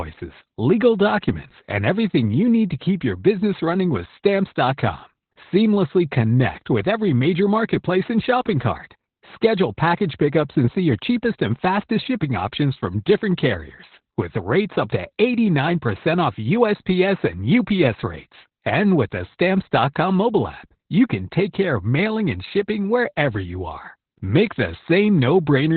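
Speech with heavy Opus voice compression throughout. Nothing survives above about 4.4 kHz, so it's narrowband and muffled, and the coarsely coded SILK excitation makes the speech hoarse and a bit robotic, which fits a very low rate of around 8 kbps.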